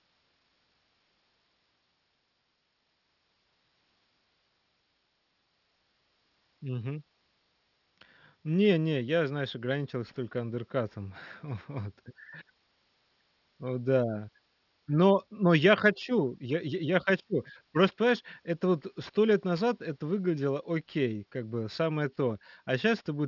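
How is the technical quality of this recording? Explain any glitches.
The recording has one persistent fault. Aliasing runs throughout the speech: content above 6 kHz folds back to wrong pitches, which fits downsampling to a 12 kHz rate without filtering. Sibilants sound gritty, and a spectrogram shows the band stopping abruptly at 6 kHz with mirrored traces roughly 30 dB down.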